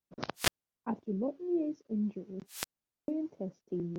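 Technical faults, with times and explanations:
0.35–0.85 s and 2.47–3.10 s, wireless microphone squelch dropout: the radio link fades, hiss swells, then the receiver's squelch mutes the speech for about 0.37 s and 0.44 s before it returns.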